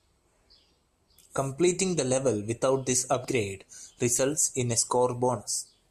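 Damaged data in a compressed stream, 3.22 to 3.25 s, just after "the level without this": corrupted frames throw the decoder off sync, producing a brief glitch while it searches for the next frame header.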